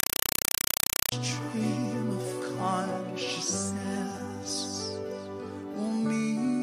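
Right from the start, 0 to 1.12 s, you get a compressed stream played as audio. An AC-3 (Dolby Digital) bitstream was passed through as if it were ordinary PCM samples instead of being decoded. Each coded frame comes out as a roughly 4 ms burst of harsh noise followed by silent padding, repeating 31.25 times a second. So for that first second or so there's just very loud, chattering static where the audio should be.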